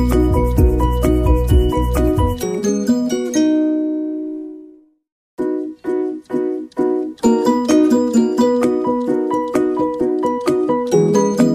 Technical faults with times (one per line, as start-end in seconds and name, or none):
none